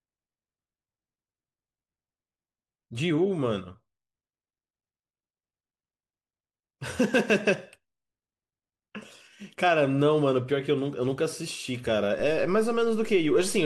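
A DC step occurs at 12.2 s: the waveform's zero line jumps by about -36 dBFS and holds there until the end of the clip. The sudden baseline shift is heard as a single low thump, while the speech itself continues unchanged.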